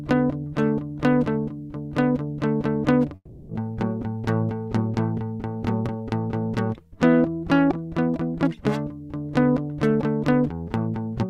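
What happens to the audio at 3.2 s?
At 3.2 s the music drops out. From 3.15 to 3.51 s there is a long network dropout, likely from lost packets. The receiver stretches the last sound into a fading buzz for about 0.34 s, then near-silence. The music resumes with that passage missing.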